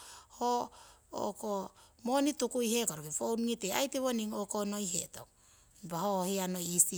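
No technical faults can be heard anywhere in the recording.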